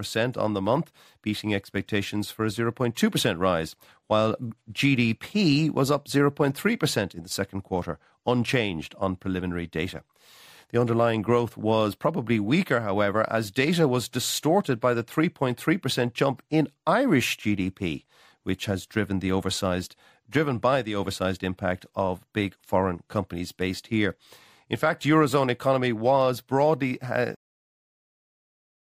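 At 27.35 s, right after "economy was broadly uh", the speech has a cut-off end: the final buffers were never written out, so the sound halts mid-utterance into digital silence. Unlike a fade-out or natural ending, there is no decay or room tail.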